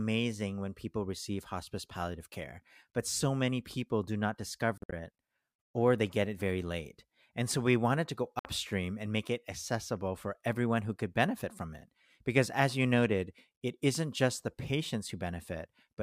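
Bluetooth dropouts at 4.78–4.93 s and 8.39–8.45 s: the speech cuts to silence in abrupt holes, likely because wireless packets arrived late and were discarded. The first is broken gaps totalling 116 ms; the second is one 58 ms hole. Speech resumes further along, as though it had kept playing.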